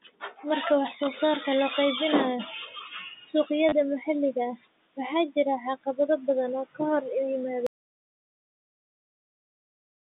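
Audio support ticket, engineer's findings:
Speech cut by the noise suppressor, 0.02–0.44 s: onset of the speech swallowed, with soft consonants and endings dipping by up to about 18 dB, around a fifth of a second affected in total. Component: noise suppressor. Mechanism: low-level speech energy classed as noise and attenuated along with the background.

Noise suppressor catching up, 2.4–4.66 s: room noise jumps by about 20 dB near 2.5 s and passes with less reduction at first, then sinks by about 11 dB over 2.26 s, settled before "waxaa jira caqabado badan". Component: noise suppressor. Mechanism: noise estimate trails the sudden rise until it adapts.

Packet loss with last packet repeated, 3.69–3.72 s: 30 ms robotic stutter, heard inside the rising-noise stretch. Component: receiver packet-loss concealment. Mechanism: lost audio filled by replaying the last good packet. Duration fits three 10 ms packets. 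The run of repeats buzzes at the packet rate.

Audio dropout to silence, 7.67 s to end: sound cuts out mid-flow just after "oo ka hor yimaada" and does not return, with silence and no room tone. Component: capture path, likely a lost input such as a disconnect or stray mute, with the recorder writing silence.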